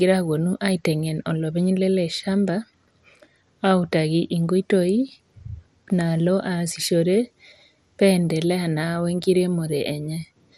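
From start to finish the speech carries plainly audible coding damage. The likely cause is MP2 compression. Layer II splits the signal into 32 sub-bands and shares a small bit budget among them. Here that budget looks tight, fitting about 80 kbps. Nothing sounds above 16.6 kHz, so the top is dull. Upper bands flicker in and out. The bands left are coarsely quantised. The result is a gurgling, granular grit under the speech.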